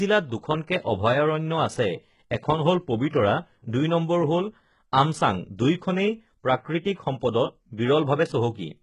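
Heavy HE-AAC compression, likely run at a very low bitrate, affects the whole clip. The sound fits a rate of around 12 kbps. Only the lower spectrum is coded properly, and the treble is rebuilt by copying lower bands upward under a coarse envelope, with nothing above 11.1 kHz. The highs aren't the original. Their harmonics don't line up with those below, so the s sounds in this speech come out gritty, metallic or lispy.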